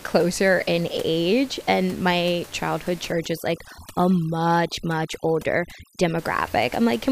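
From 3.12 s to 6.18 s, just after "age and my childhood", the clip shows overdone noise removal. A noise reducer set far too aggressively pushes individual frequency bands down whenever they sit close to its noise estimate, so the room noise, about 21 dB below the speech before this point, drops and breaks up into twinkling specks. Unlike a noise gate, which mutes everything at once, the removal here happens band by band, leaving those isolated chirps behind.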